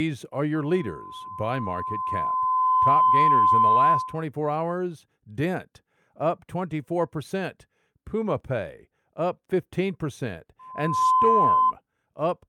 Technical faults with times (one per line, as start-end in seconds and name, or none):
0.54-4.25 loudspeaker feedback squeal
10.59-11.73 loudspeaker feedback squeal